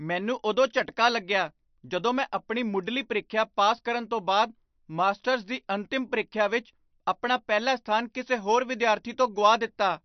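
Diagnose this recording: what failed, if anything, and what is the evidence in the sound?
The codec stage is at fault. Throughout the speech, everything above 6.1 kHz is missing, and the sound has a plainly audible watery, swirling quality, with s sounds thinned and metallically chirping. This is likely MP3 compression at a low bitrate; the cut-off fits roughly 48 kbps. Short of bits, the encoder discards the treble and zeroes weak frequency lines frame by frame. On a spectrogram this shows as a flat ceiling at 6.1 kHz and speckled gaps that flicker between frames.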